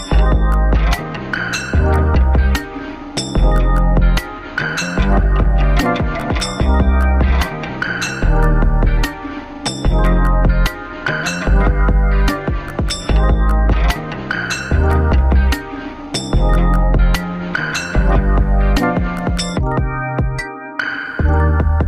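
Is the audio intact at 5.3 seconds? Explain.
Yes, at 5.3 seconds the audio plays through intact, with no dropout, click, distortion or other fault at that point.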